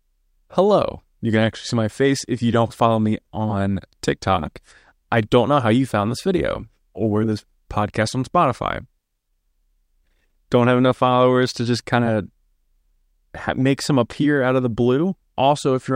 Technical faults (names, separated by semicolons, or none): dropped samples